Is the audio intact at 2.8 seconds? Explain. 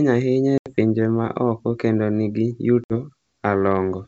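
No, not quite. Right after "oko kendo ni gi", at about 2.84 s, there's packet loss on an ADPCM call. About 60 ms drops out as a hard-edged silent gap, likely a few packets. Because ADPCM sends only differences, the decoder's predictor and step size lose track of the sender's, so the G.722 audio comes back slightly distorted before settling by about 2.94 s.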